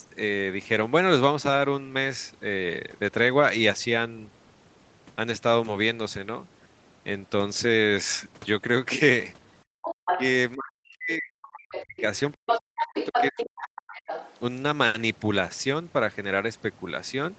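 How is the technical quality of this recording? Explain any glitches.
The recording has clear echo-canceller trouble in the middle, from about 9.6 s to 14.3 s, on a call path whose content stops at 8 kHz.

Background gated by the echo canceller, 9.64 to 9.82 s: with the far end playing, the canceller clamped the microphone down. The room sound behind the talker falls away by about 40 dB for roughly a fifth of a second, then returns.

Other side's voice leaking through, at 9.82 to 10.3 s, 11.74 to 12.01 s, 12.48 to 13.43 s and 13.96 to 14.34 s: a second voice can be heard alongside the talker. It is likely loudspeaker playback that the canceller failed to subtract. It arrives at about the talker's level in the first and third stretches and about 10 dB lower in the others.

Speech suppressed in double talk, at 10.12 to 10.18 s and 10.55 to 14.0 s: the talker's voice sags while the other voice is present. 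The likely cause is the canceller failing to separate the talker from the echo and attenuating both. The first dip is slight, about 5 dB. The second is deep, reaching about 40 dB across roughly three seconds.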